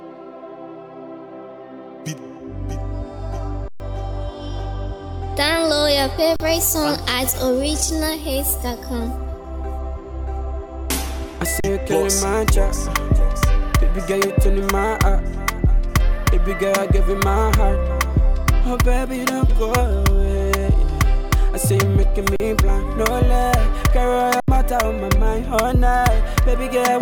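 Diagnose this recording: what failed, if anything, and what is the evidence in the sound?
Underrun with held sample at 3.68, 6.36, 11.6, 22.36 and 24.4 s: the output buffer ran dry, the level froze flat for 40 to 120 ms, then resumed after audio was lost.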